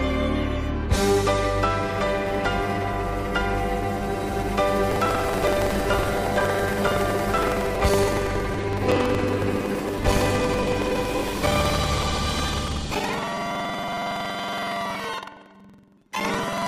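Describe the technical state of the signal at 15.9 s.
A robotic 21.5 Hz rattle runs through the sound: buffer tearing, from 4.88 s onward. Writer and hardware reader cross each period, which fits a 2048-sample buffer, splicing in audio about 100 ms older.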